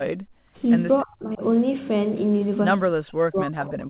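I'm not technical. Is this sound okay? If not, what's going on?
No. The speech dips sharply or drops out in patches from 0.11 to 0.61 s, from 1.03 to 1.43 s, and from 2.92 s to the end. This is likely speech suppressed in double talk: the call's echo canceller muted this talker while the other side was also speaking.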